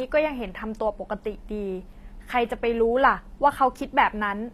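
Low-bitrate audio saved at a high bitrate runs through the whole of this speech clip: nothing is present above about 14.9 kHz, and the smearing and swirly artefacts of a low-bitrate encoding remain, pointing to an HE-AAC source around 24 kbit/s that was likely re-encoded as MP3 at about 256 kbit/s. The generous second encoding adds almost no damage of its own, but it cannot restore the detail and high band the first codec already discarded.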